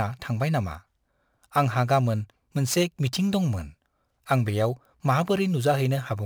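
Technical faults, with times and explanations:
Throughout, crude rate conversion: the speech was resampled without a proper filter by simply picking the nearest sample, and the inharmonic pattern fits a 48 kHz to 44.1 kHz change. Dropping samples on that fixed cycle adds an error about 30 dB below the speech. It is heard as a gritty, inharmonic fizz that rides on the louder and brighter parts of the speech, producing tones unrelated to its pitch.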